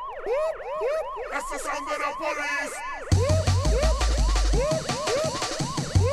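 No technical faults are audible anywhere in this audio.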